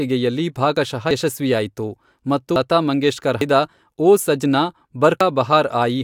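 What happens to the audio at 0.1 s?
Nothing goes wrong at 0.1 s; the speech there plays cleanly, with no dropout, click, distortion or other fault.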